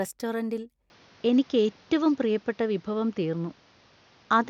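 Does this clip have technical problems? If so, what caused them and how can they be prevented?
Yes. At 0.9 s the input likely switched to a poorer device, and the change holds to the end. The sound turns duller and boxier with nothing above about 6.8 kHz, the level shifts by roughly 5 dB, and a new background noise floor appears around 35 dB below the signal. There is no gap at the switch. The narrower band, new tone and new noise are typical of a different microphone or a headset call profile taking over. Lock the recording input to one device and disable automatic device switching before recording.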